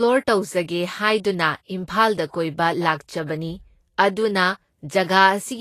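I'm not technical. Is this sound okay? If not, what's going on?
No. The speech sounds hissy and grainy from start to finish. The top end stops abruptly, with nothing above about 14.2 kHz. The finest detail at the highest pitches is gone. A rough, noisy texture fills that space instead, and sharp sounds lose some of their crispness. The likely cause is Vorbis compression at a low quality setting. It shrinks the file by storing the treble very crudely, so its fine detail turns into noise.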